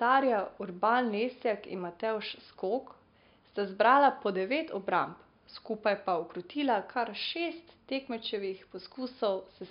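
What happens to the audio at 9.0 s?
Nothing goes wrong at 9.0 s; the speech carries on intact there, with only the room's faint background noise, about 50 dB below the voice, sitting underneath as part of the recording.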